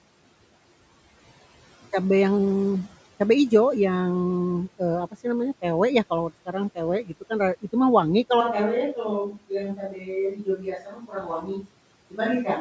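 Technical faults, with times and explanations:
7.04 to 11.7 s, speech cut by the noise suppressor: at 7.04–7.31 s, just before "ra itu mah wangi", then at 9.32–9.51, 9.75–10.1 and 10.31–11.7 s, parts of the speech sound swallowed, dipping by about 12 to 19 dB. The suppressor mistook them for background noise and turned them down.
8.41 s to the end, switch to a distant microphone: after "ra itu mah wangi" the voice suddenly turns hollow and roomy, with thinner bass, about 5 dB quieter, and room noise only about 30 dB below it. The likely cause is that the close microphone dropped out and a farther one took over.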